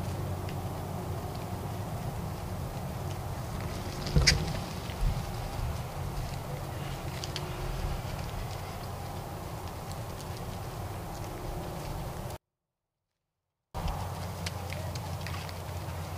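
From 12.36 s to 13.75 s the sound falls by about 48 dB at once, staying clean but nearly inaudible. This is a 24-bit alignment error: 24-bit samples sitting in the low bytes of 32-bit words were read as full 32-bit integers.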